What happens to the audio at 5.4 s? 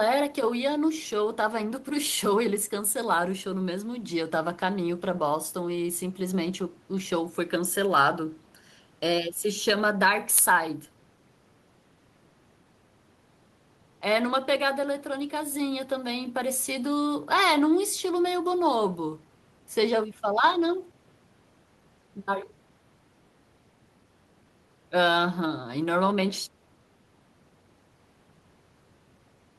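Nothing goes wrong at 5.4 s: the speech carries on intact through that point, with only the call codec's steady band limit near 12 kHz shaping the sound.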